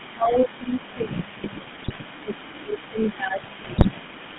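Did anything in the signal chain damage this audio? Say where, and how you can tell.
Yes. Codec stage: the whole clip carries GSM full-rate coding, with buzzy, gravelly speech confined to about 150 Hz to 3.5 kHz. The spectrogram shows a hard ceiling and smeared harmonics.

Call processing: a faint echo leak trails the speech throughout, about 142 ms late and roughly 20 dB down, visible as ghost copies on the spectrogram. The likely cause is a loudspeaker echo the canceller missed.

Call processing again: speech is likely suppressed in double talk from 0.07 to 1.36 s and 2.22 to 4.0 s, dipping by as much as about 15 dB. The waveform shows pumped, hollowed-out envelope.

Network/radio stage: GSM bit errors cause squawks and gargling at 1.82 to 1.99 s and 3.62 to 3.85 s. Corrupted decoder parameters appear as sudden level spikes and warped spectral bands.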